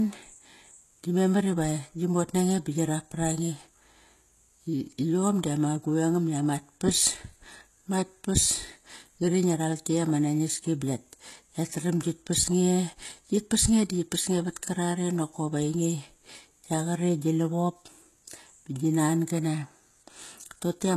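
The speech was likely squeezed through HE-AAC compression at a low bitrate, around 16 kbps, so only the lower spectrum is truly coded and the treble is rebuilt by copying bands upward. Throughout, sibilants sound gritty and lispy, and nothing reaches above about 12.3 kHz.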